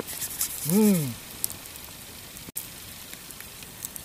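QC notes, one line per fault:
2.50–2.56 s, Bluetooth stall: the sound cuts to silence for 55 ms, then picks up again. The likely cause is radio interference holding back packets until the headphones' buffer ran empty, pausing playback until the resent packets arrived.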